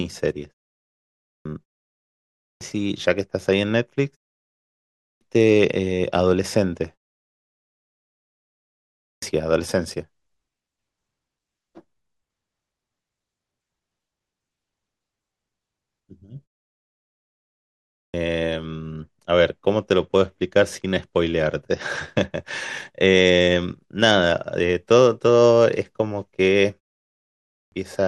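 At 0.84, 2.02, 4.59, 8.58, 17.5 and 27.07 s, a clipped start after a pause swallows about 0.6 s as the sleeping output wakes late. Speech bursts in already underway, unlike muted pauses, where nothing is lost.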